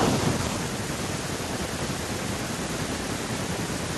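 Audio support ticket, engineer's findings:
No audible faults found in this speech recording. No working path flagged for comment; nothing further to report.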